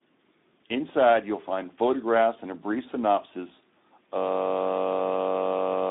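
From the start, the speech carries Speex codec damage that is plainly audible. It is confined to roughly 250 Hz to 3.7 kHz, with nothing above 3.8 kHz. Too few bits for the excitation leave it noisy and hoarse, which fits a low setting near 11 kbps.

At 4.18 s a system hang loop begins and lasts to the end. The output repeats one 21.33 ms piece of audio, which fits a 1024-sample buffer, while the system stays frozen. At 46.9 Hz this is heard as a steady buzz.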